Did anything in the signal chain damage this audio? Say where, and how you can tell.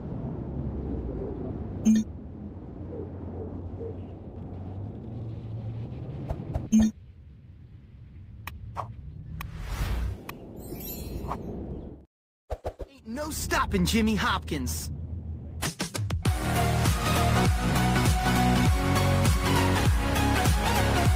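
No, nothing in the signal chain damaged this audio.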